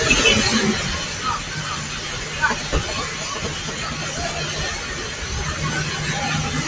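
A noise suppressor applied to music or sounds runs throughout this recording of everyday sounds, which passed through a call's microphone path with nothing above 8 kHz. The speech-tuned suppressor reads steady sound and decay as noise, pulling held parts and tails down by around 5 dB while onsets pass, so the sound pumps and thins. GSM signalling bursts appear from 2.50 to 3.93 s, a galloping dit-dit-dit of short 217 Hz buzzes roughly 10 dB below the sound, as a nearby 2G phone's radio bursts are rectified by the audio circuitry.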